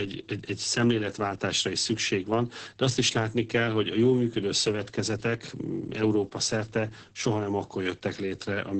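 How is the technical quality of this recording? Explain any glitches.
The technical quality is poor. Heavy Opus voice compression runs through the whole speech clip. The band stops at about 8.8 kHz, so the voice loses its air and sibilance, and the speech comes out muffled, hoarse and faintly robotic. The audio points to the codec's speech mode, where a linear-prediction coder models each short frame and encodes the excitation coarsely, at a bitrate around 10 kbps. A simple low-pass filter would only dull the top and leave the voice clean. The hoarse, buzzy texture here comes from the coarse excitation coding, not from filtering alone.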